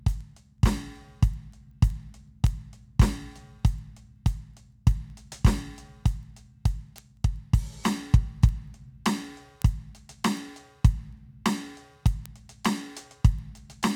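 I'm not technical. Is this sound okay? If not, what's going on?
No. Two pieces of digital gear passing this music along run on separate clocks that disagree very slightly, causing word clock ticks. Each slip drops or repeats a sample, giving sharp clicks roughly every fifth of a second, about 70 of them, from 0.21 s to the end.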